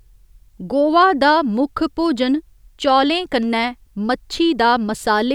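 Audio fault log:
No audible faults in this speech recording.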